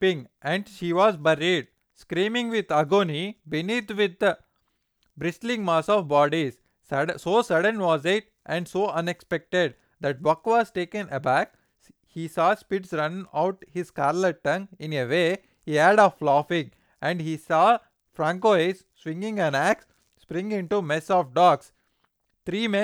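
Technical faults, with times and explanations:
No technical faults can be heard in this recording.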